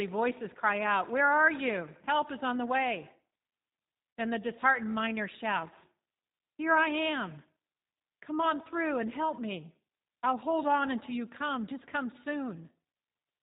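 Throughout, the G.729 codec rebuilds the speech at 8 kbit/s from a filter and sparse pulses, leaving it rough and synthetic, with a spectrogram empty above 4 kHz. From 4.10 to 4.16 s, VoIP packet loss concealed by the speech codec stretches 60 ms into a fading sound, which fits three lost 20 ms packets. The waveform shows a shrinking, repetitive stretch.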